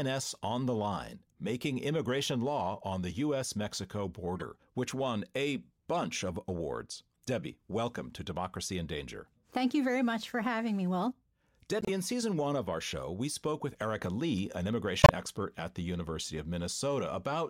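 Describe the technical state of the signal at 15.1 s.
At 15.1 s the speech is ending a corrupt frame decoded fault that runs from 15.00 to 15.10 s, just before "expert at the". Damaged bits in what sounds like a few compressed frames were decoded as if valid, so misread gains and codes push energy into the wrong frequencies. It sounds like a short chirp or burst of noise, peaking at about -10 dBFS. A spectrogram shows a blocky smear at wrongly placed frequencies.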